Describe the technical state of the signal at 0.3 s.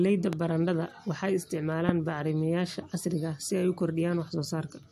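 A single loud pop sits at 0.33 to 0.35 s, well above the speech level, a sharp click over the continuing sound, likely from a voltage step or static discharge.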